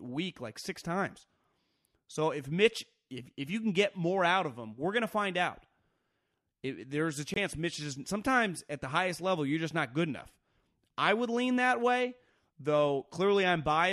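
At 7.34 s, just after "there's a", the speech cuts to silence for about 23 ms with abrupt edges, ending by 7.38 s and resuming mid-flow as if it had kept playing. This is most likely a Bluetooth dropout, a single frame arriving too late and being dropped.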